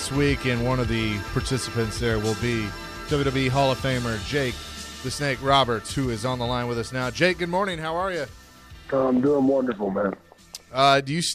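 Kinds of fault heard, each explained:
No technical fault can be heard at any point, and the signal keeps unbroken continuity.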